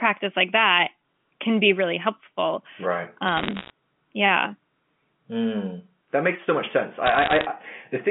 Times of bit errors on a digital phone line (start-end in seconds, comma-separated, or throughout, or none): 3.28-3.70, 7.06-7.46